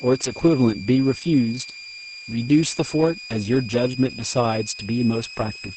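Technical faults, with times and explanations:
throughout, switching supply whistle: A switching power supply in the chain is running in an audible burst mode, or beating against a second supply, and leaking into the signal. The result is a thin high whistle that wanders between about 2.37 and 2.53 kHz as the load shifts. It sits only about 15 dB below the speech.
throughout, Opus voice compression: The speech has passed through Opus in its SILK linear-prediction mode at a very low rate, which fits a bitrate around 10 kbps in wideband operation. Nothing survives above about 8.7 kHz, so sibilants and breath lose their edge and the voice sounds muffled. With so few bits, the coder describes the excitation only coarsely. That leaves the speech hoarse and faintly robotic, and the whistle underneath comes out warbled and burbling.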